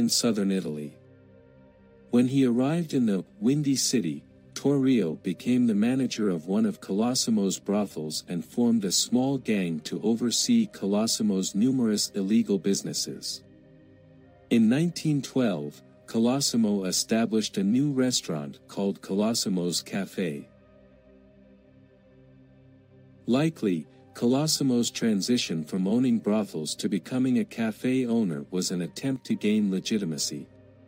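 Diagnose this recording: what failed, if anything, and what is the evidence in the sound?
A sudden gain jump hits at 29.16 s: sound and background noise drop together by about 6 dB, then come back at 29.30 s. That's a digital step with no ramp, likely a one-bit shift or gain setting in the driver or processing chain.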